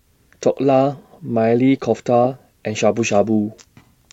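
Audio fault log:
No technical faults heard.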